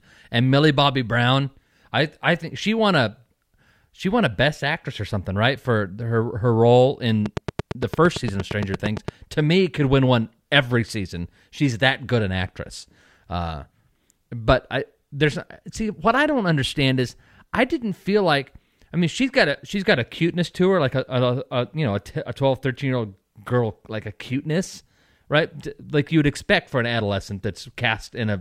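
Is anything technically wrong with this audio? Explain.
Yes. From 7.26 to 9.09 s, just after "for her her role", a train of clicks ticks over the speech. About fifteen similar pulses arrive regularly, 8.76 per second, peaking around 15 dB above the speech. Likely cause: interference from nearby equipment, or a faulty connection or power supply.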